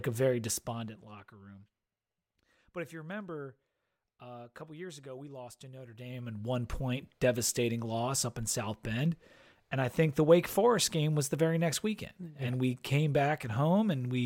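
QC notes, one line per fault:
5.80–6.53 s, zipper noise: after "ago we lost to", level moves about 20 dB in 1 dB steps, roughly 20 per second, each unsmoothed step ticking audibly.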